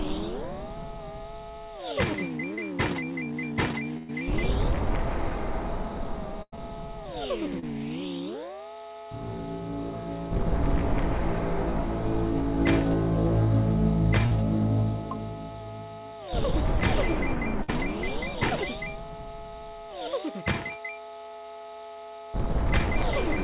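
The audio comes through a call link with nothing above 4 kHz, which points to a narrowband G.711 A-law codec at 64 kbps. Three short concealed packet losses occur, at 2.54 s, 7.59 s and 14.26 s. At each one, some audio failed to reach the decoder in time: about 40 ms, 20 ms and 40 ms. The receiver patched each hole by extending the preceding sound for about 31, 28 and 43 ms and then blended back. Each one is heard as a brief smear or wobble. There are also three bursts of packet loss, at 3.97 to 4.10 s, 6.42 to 6.54 s, and 17.63 to 17.70 s. In these, a run of audio was lost: about 120 ms, 100 ms and 60 ms. The receiver stretched the last sound across the gap for about 114, 96 and 56 ms, letting it fade, and the first never went silent. The audio then picks up further on, with the stretch in between gone.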